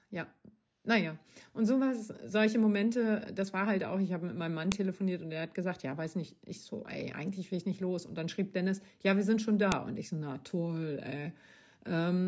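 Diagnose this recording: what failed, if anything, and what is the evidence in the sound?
The failure is at the storage or stream-assembly stage: a file header played as audio. Sharp, loud clicks occur at 4.72 s and 9.72 s, exactly 5 s apart. They land regardless of what the speech is doing at those moments. That spacing marks the joins between 5-second WAV pieces that were concatenated with their headers left in. Each piece's few dozen header bytes are read as sample values and reproduced as a brief snap.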